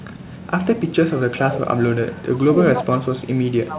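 Echo leak, 0.23 to 0.47 s: a very faint copy of speech, far below the main talker, trails it by about 0.36 s. This is likely an echo canceller on a loudspeaker end letting part of what its microphone caught return down the line.

Speech suppressed in double talk, from 2.14 s to the end: the talker's level sinks, at its deepest by about 25 dB. The likely cause is an echo canceller mistaking overlapping talk for echo and turning both its own talker and the echo down.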